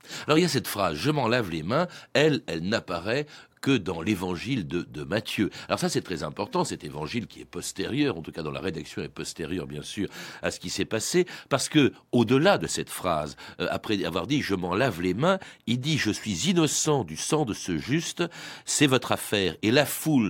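Listening to the speech recording, nothing stood out as a technical fault at any point.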